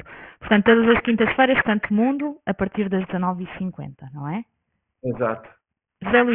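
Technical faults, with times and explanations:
Throughout: aliasing. Content above 3 kHz folds back as gritty, metallic false tones about 10 dB below the speech, which fits downsampling to roughly 6 kHz without an anti-alias filter.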